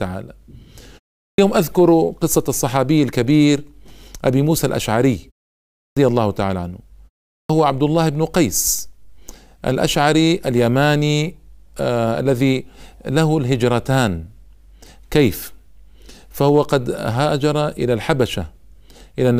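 Clipped start after a pause at 1.23, 5.79 and 7.32 s: after gaps of 0.32 to 0.56 s, the output path needs time to wake. Roughly 150 to 175 ms of each onset is swallowed, so speech jumps abruptly out of the silent pauses.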